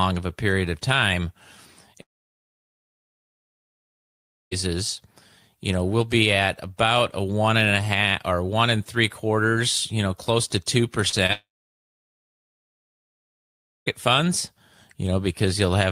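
A speech recording with two long network dropouts. From 2.01 to 4.53 s and again from 11.33 to 13.88 s, about 2.5 s of speech vanishes into near silence, likely from lost network audio. Just before the second gap come two short concealed packet losses. At 11.09 to 11.14 s and 11.26 to 11.31 s, 40 ms and 20 ms of audio are patched over, heard as brief smears.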